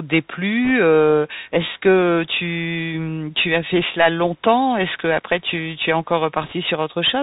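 This speech clip passed through a Bluetooth CVSD headset codec, the narrowband one-bit-per-sample scheme running at 64 kbps, so nothing above 4 kHz survives, s sounds come out scratchy, loud high-frequency passages distort as the adaptive step falls behind, and a granular hiss sits under everything. Bit errors on the Bluetooth voice link strike at 0.65 to 0.71 s and again at 6.41 to 6.53 s, the second burst somewhat heavier, roughly a percent or a little more of bits flipped. Because every CVSD bit carries equal small weight, they bring no sharp clicks, only a brief rushing crackle over the speech.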